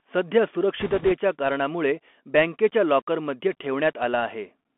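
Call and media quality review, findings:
Bluetooth CVSD headset codec, throughout. Narrowband: nothing below about 250 Hz or above 3.4 kHz. Granular hiss under the speech, scratchy s sounds, and loud high content distorting because the one-bit up/down step can't adapt fast enough. Fits a 64 kbps CVSD link. Unlike a wideband headset codec such as mSBC, the highs are simply gone rather than dulled.

Bit errors on a Bluetooth voice link, 0.80–1.13 s, ending just before "कारणामुळे बँकेच्या लाॕकरमध्ये". Rushing, crackly noise laid over the speech, consistent with an error rate of a few percent. Each flipped CVSD bit nudges the signal only slightly and its effect dies away, so there are no sharp clicks as with PCM bit errors, and no gaps or repeats as with packet loss.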